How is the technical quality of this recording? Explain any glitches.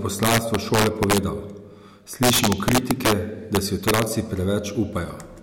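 The recording has serious glitches: violent cracks on the louder speech in three stretches, from 0.23 to 1.18 s, 2.23 to 3.12 s and 3.55 to 4.02 s. This is integer overflow: peaks driven about 5 dB past the maximum wrap to the opposite sign instead of being limited, producing cracks far harsher than clipping.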